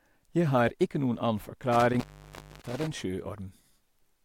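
From 1.73 s to 2.87 s the speech is disrupted by an intermittent contact, a loose cable or plug connection that momentarily breaks the signal path. Within that stretch the line opens for about 0.60 s in total, and the speech drops out. Each break and reconnection is marked by crackle as the contact scrapes open and closed, and while the circuit is open a faint hiss remains in place of the speech.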